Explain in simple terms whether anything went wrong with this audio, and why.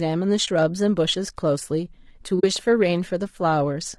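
The voice sounds rough and grainy all the way through, with a hissy texture between the tones and a thin, artificial top end. That's most likely low-delay AAC compression, the kind video calls use, squeezed hard enough that it can't keep the voice clean.

There are also two brief holes where the sound fades out and back in: one from 0.45 to 0.48 s, and a longer one from 2.39 to 2.44 s. That's AAC frame loss with muting. Chunks of audio went missing, and the decoder filled each gap with silence, so the dips fit one lost frame and then two.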